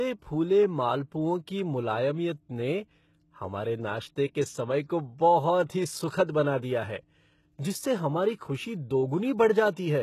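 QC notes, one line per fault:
Throughout, HE-AAC compression: the treble stays bright up to a hard ceiling at 12.3 kHz, yet sibilants sound gritty, metallic and lispy, because the top band is a copy of lower bands reshaped by a coarse envelope rather than the real upper harmonics. That rebuilt sheen sets it apart from plain low-pass band-limiting, which would simply sound dull. The heavy damage fits a very low bitrate, likely around 16 kbps in HE-AAC v2.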